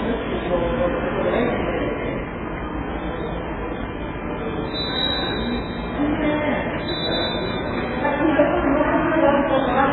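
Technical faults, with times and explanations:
throughout AAC compression: likely heavy AAC-LC coding, which fits a bitrate near 8 kbps, removes everything above 4 kHz, leaving the sound dull, smeared and warbling.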